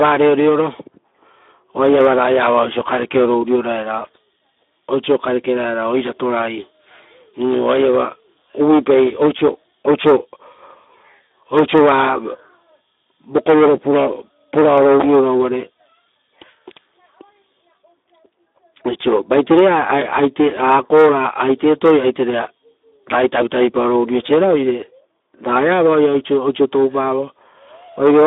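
Speex codec damage runs throughout the speech. With so few bits for the excitation, consistent with a rate near 11 kbps, the voice sounds noisy and hoarse. The band sits between 250 Hz and 3.7 kHz, with nothing above 3.8 kHz.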